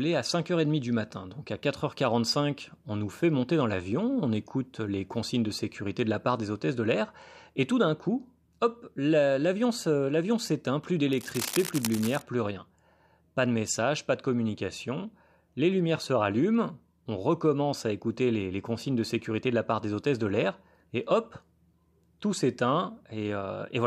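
From 11.13 to 12.22 s, just after "hop l'avion s'éteint plus" and before "plus rien", a dense, uneven scratching rustle sits roughly 10 dB under the speech. This cable scratch noise is likely a worn cable or connector shifting, its contact resistance jumping rapidly.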